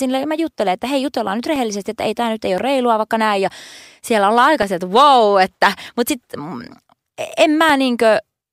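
Recorded speech carries periodic USB or driver dropouts: from 0.54 s, just after "ja mä", to 7.70 s, about a millisecond of audio is replaced by silence every 1.02 s, heard as regular ticks over the voice. A background task is stalling the audio driver at a fixed interval. On the waveform each event is a tiny flat gap. On a spectrogram it is a thin vertical broadband line, evenly spaced, visible only where speech is present.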